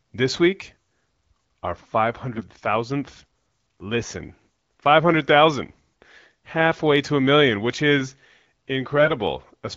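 Near the end, from 8.97 to 9.14 s, AMR bit errors roughen the speech for a stretch that fits about seven coded frames, consistent with a few percent of the weaker bits flipped. Pitch and loudness hold roughly steady, but the misplaced excitation pulses and skewed gain and spectral values make the sound hoarse and gargly. A spectrogram shows smeared, noisy harmonics and ragged formants there; the waveform's envelope stays level but turns jagged. The wideband AMR-WB coding around it sounds clear.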